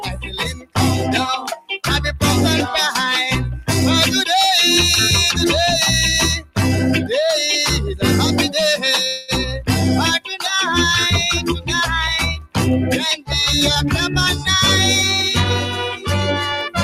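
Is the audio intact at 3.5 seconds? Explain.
No. At 3.5 seconds, as throughout, a noise suppressor applied to music or sounds is treating sustained tones and tails as noise, pulling them down by roughly 5 dB. Attacks pass, so the sound pumps; the waveform shows dipping envelopes and the spectrogram shows tails fading early.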